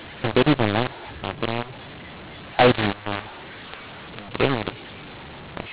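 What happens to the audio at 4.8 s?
At 4.8 s the speech carries the mu-law and A-law mix-up that runs through the whole clip: A-law bytes decoded as mu-law scramble sample levels, giving harsh distortion and hiss in pauses. The waveform looks jagged, gaps never reach zero, and the spectrogram fills with broadband noise up to 4 kHz.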